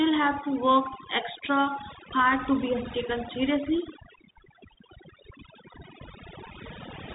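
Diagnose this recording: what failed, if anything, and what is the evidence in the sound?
Overdone noise removal at the call-processing stage runs through the whole recording. Pauses fall to near silence with twinkling specks. Bands near the noise estimate are being cut hard, taking the quieter parts of the voice with them.

A Bluetooth CVSD headset codec is also audible throughout. Nothing passes above 3.8 kHz, s sounds come out scratchy, and a granular hiss sits under the speech. The one-bit up/down coding, which fits a 64 kbps link, cannot track fast, loud high-frequency detail, so it distorts.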